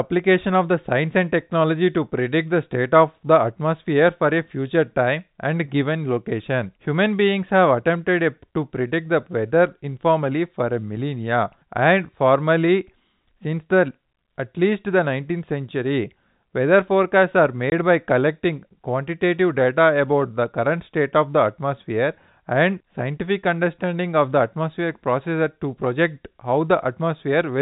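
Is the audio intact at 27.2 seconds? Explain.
Yes, the audio is intact at 27.2 seconds, with nothing there beyond the normal narrow telephone band and faint level-following hiss of G.711 telephone coding.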